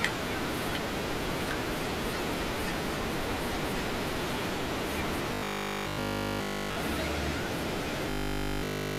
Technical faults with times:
5.34-6.78 robotic sound from repeated short buffers
8.10-8.98 robotic sound from repeated short buffers

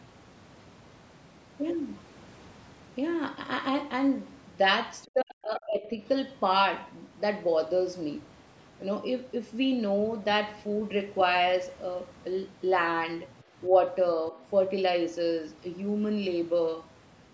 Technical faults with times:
5.06-5.99 speech suppressed in double talk
13.30-13.36 other side's voice leaking through
14.31-14.38 speech suppressed in double talk
14.40-14.50 other side's voice leaking through

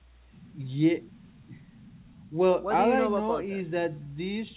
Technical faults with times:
none

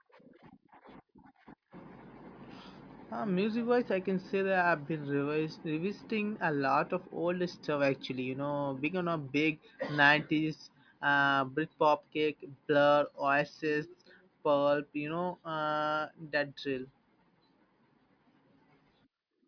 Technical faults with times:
none

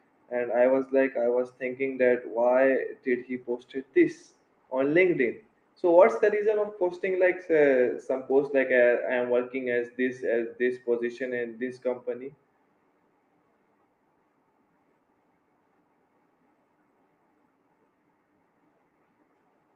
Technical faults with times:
3.10-9.63 call bitrate drop

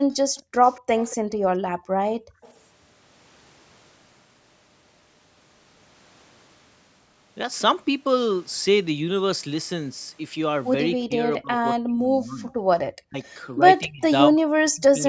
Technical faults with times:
0.10-1.16 echo leak
1.27-2.41 background gated by the echo canceller
2.41-2.57 echo leak
10.96-12.62 speech suppressed in double talk
12.49-12.53 echo leak
13.02-13.17 speech suppressed in double talk
13.55-14.99 speech suppressed in double talk

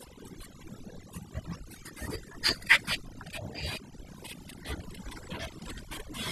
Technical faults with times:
0.00-6.32 overdone noise removal

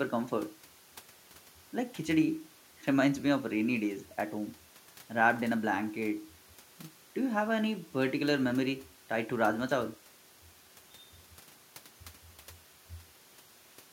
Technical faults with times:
none

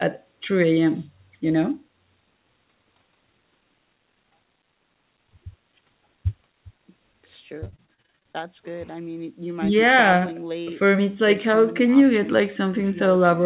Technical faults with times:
7.60-8.36 repeated packet loss (robotic sound)

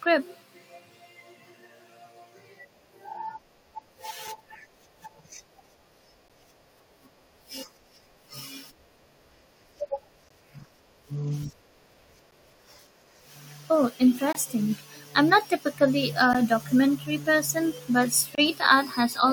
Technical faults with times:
4.27 gap between stream segments
6.28 gap between stream segments
10.29 gap between stream segments
12.31 gap between stream segments
14.33-14.35 gap between stream segments
16.33 gap between stream segments
18.35-18.38 gap between stream segments

